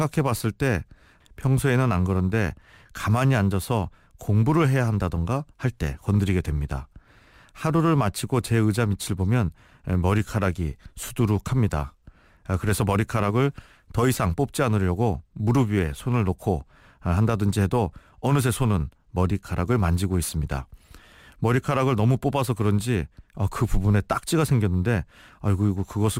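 A gritty, inharmonic fizz rides on the speech from start to finish, growing with louder and brighter passages. This is crude rate conversion: samples were simply repeated rather than filtered, which fits a 44.1 kHz to 48 kHz change, leaving unrelated tones roughly 30 dB down.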